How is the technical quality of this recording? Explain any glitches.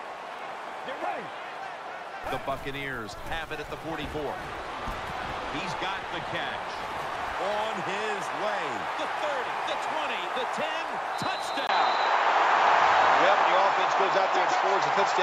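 The recording has one glitch. At 11.67 s, after a 20 ms gap, the sound turns duller, cut off above 7.6 kHz, shifts level by a few decibels and gains a faint new noise floor. That points to the input likely switching to a poorer device. A plain filter or codec change would not bring the gap and the different noise.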